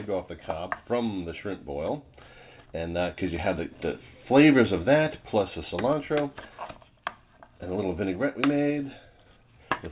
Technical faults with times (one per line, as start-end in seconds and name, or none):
none